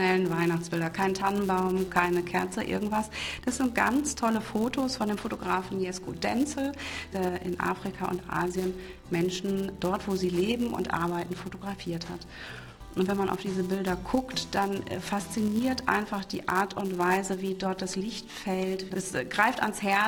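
From start to finish, the audio carries a steady buzz at about 188 Hz. This is a filter restarted on every block. The filter loses its memory at each block boundary and begins again from silence. That leaves a small transient at the start of every block. The repeat rate fits a 256-sample block. At this rate the ticks merge into a buzz rather than separate clicks. The buzz rises and falls with the level of the sound.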